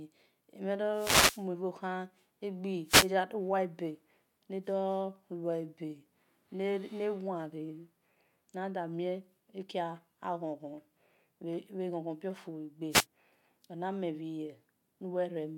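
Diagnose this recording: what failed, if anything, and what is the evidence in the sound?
The wireless microphone's radio link is failing, ahead of the converter. There are three wireless microphone noise hits, at 0.91–1.46 s, 2.85–3.10 s and 12.90–13.06 s, each a swish of static over the speech as the FM signal fades through reflection nulls and the receiver's noise comes up.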